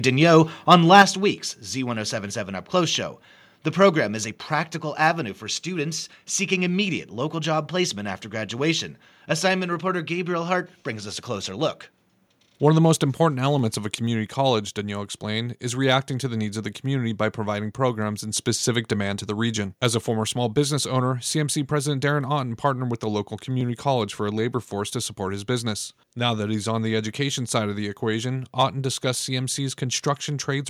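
From 0.71 to 1.02 s the loudest peaks turn harsh and crackly, likely microphone overload: input about 4 dB too hot flattens a few percent of samples, unlike a clean level drop. At 1.02 s the voice and background fall together by about 6 dB, likely the microphone volume stepped down in one jump right after the distortion, not a gradual fade. Overlapping chunks produce brief clicks at 3.58, 8.59, 13.59, 18.60, 23.61 and 28.61 s. About every 5 s, 7 ms of audio is replayed, a regular stutter rather than random dropouts.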